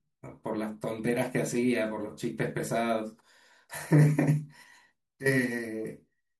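No technical faults can be heard anywhere in the speech.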